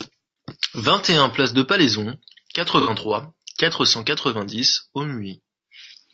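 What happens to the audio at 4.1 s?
Low-delay AAC compression runs throughout, including 4.1 s: short frames, likely at about 32 kbps, resolve harmonics poorly, leaving the speech plainly rough and grainy.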